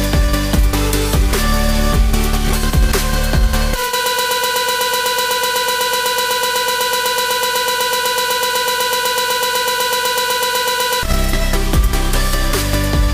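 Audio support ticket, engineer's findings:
Broken-record loop, 4.06–11.03 s: player or stream likely stalled, re-sending its last held fragment. A 125 ms slice repeats back to back, replacing the intended audio.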